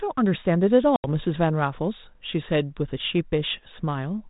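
At 0.96 s the speech drops into a hard-edged gap of about 80 ms, packet loss on an ADPCM call, roughly four packets. Silence fills the hole, and the receiving decoder's adaptive predictor and step size no longer match the sender's. The speech therefore comes back at about 1.05 s with brief, slight distortion, then settles over a few tens of milliseconds. The 32 kbit/s G.726 coding underneath leaves only light codec damage.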